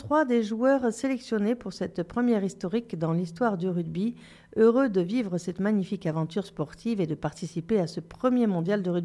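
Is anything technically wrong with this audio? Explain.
No, there are no technical faults.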